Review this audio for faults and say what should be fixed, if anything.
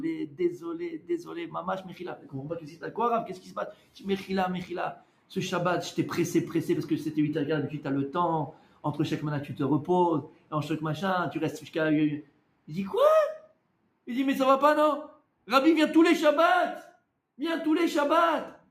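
The level pumps and thins by around 10 dB throughout, with held sound and tails sinking while attacks survive: a speech-made noise suppressor applied to music or sounds. Bypass the speech noise suppressor for non-speech material.

Steady and decaying passages drop by about 11 to 12 dB at 0.27–2.91 s, 3.29–4.28 s, 4.94–5.32 s, 8.52–8.84 s, 10.23–10.52 s and 12.22–12.69 s. This is sound cut by the noise suppressor, which treated that sound as noise. Disabling the suppressor, or switching it to a music-aware mode, would keep these passages intact.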